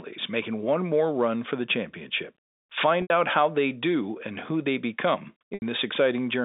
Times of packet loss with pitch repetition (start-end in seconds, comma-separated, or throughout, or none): 3.02-3.10, 5.54-5.62